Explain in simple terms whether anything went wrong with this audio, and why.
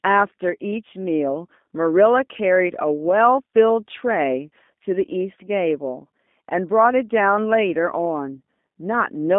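G.729 codec damage, audible throughout the clip from start to finish. The speech was squeezed through a low-rate phone-call codec that doesn't send the actual sound. It sends a rough recipe for it: the shape of the mouth and throat, the pitch, and a few pulses every few milliseconds, and the far end rebuilds the voice from that. The rebuild here is plainly rough and synthetic, and the line also trims everything outside roughly 200 Hz to 3.6 kHz, so the speech sounds thin and muffled.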